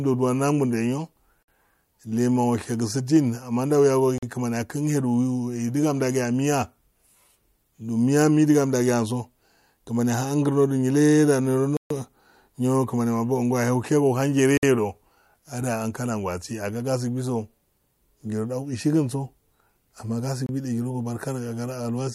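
Bluetooth stall dropouts cut the speech to silence five times: at 1.43 s for 54 ms, 4.18 s for 44 ms, 11.77 s for 137 ms, 14.57 s for 56 ms, and 20.46 s for 26 ms. Each gap is a hole of silence before the speech resumes. The likely cause is radio interference delaying packets so the headphones' buffer emptied and playback paused until the resent audio arrived.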